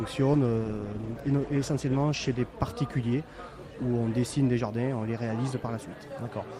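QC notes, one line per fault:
0.34–2.47 s, call bitrate drop: the bandwidth estimate fell and the encoder was pushed to far fewer bits, which fits a fall from 32 to 15 kbps. Coarser coding and lost high frequencies leave the sound rough and dulled for about 2 s until the rate recovers.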